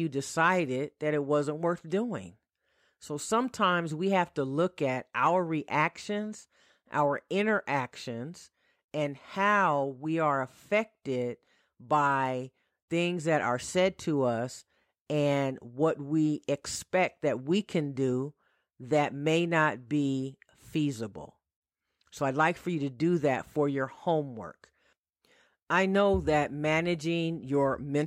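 Nothing in the recording stands out as a technical fault, so there's nothing here to point to or explain.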